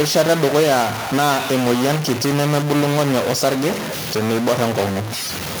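From start to finish, the speech carries a distortion. It does not come and go. The pauses are not silent either. They fill with a steady hiss. This points to a stuck bit, likely from a broken data line or a faulty converter. One bit of each sample stays fixed. Roughly half the samples are pushed off by that bit's weight. Near zero the fixed bit flips the small values, so quiet gaps turn to noise.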